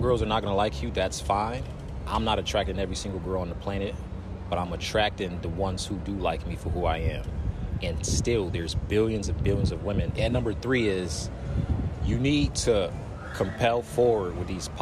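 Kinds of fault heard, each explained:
No technical faults of any kind can be heard anywhere in the signal.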